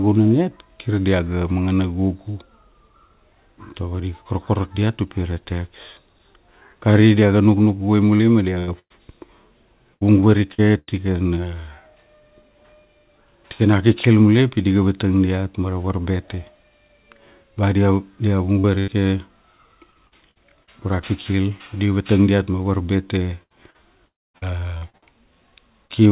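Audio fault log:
8.16–10.90 s, 18.59–20.70 s, 23.43–25.92 s: repeated packet loss (robotic sound). Six or seven packet gaps per stretch, up to 110 ms long, were each patched by extending the preceding sound. The speech turns choppy, with pieces missing. The first stretch follows "diaga nuknuk guvai", and the second ends just before "go ra".
24.06–24.37 s: long network dropout. The sound carries on briefly as a fading buzz, then goes silent for about 240 ms, likely because packets stopped arriving, so that piece is gone.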